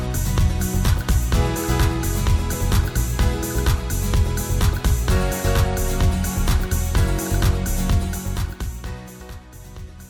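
At 2.53 s, 5.64 s and 9.20 s, damaged data in the compressed stream gives a brief chirp, squawk, click or short hole. The decoder misreads the corrupted frames, loses sync and skips ahead to the next frame header. The level holds steady, with no fader-style changes.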